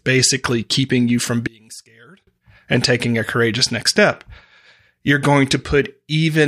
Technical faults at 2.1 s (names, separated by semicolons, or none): one channel inverted